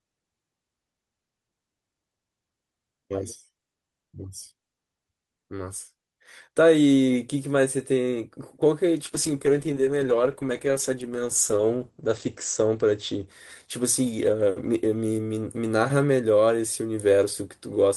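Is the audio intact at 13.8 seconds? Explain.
No. At 13.8 seconds the speech is inside a call bitrate drop running from 9.04 to 15.85 s. The encoder's rate falls from 32 to 12 kbps, with its lowest rate holding for 3.2 s, so the speech is coded more coarsely and its bandwidth shrinks from 20 kHz to 8 kHz. It sounds rough, watery or muffled. Unlike packet loss, there are no gaps or dropouts, only continuous smeared degradation until the bitrate recovers.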